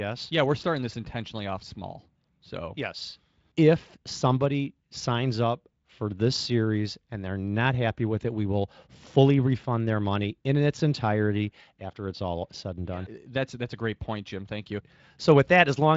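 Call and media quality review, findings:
Nothing to flag on this speech clip: no faults turned up anywhere in it, so there's nothing to chase here.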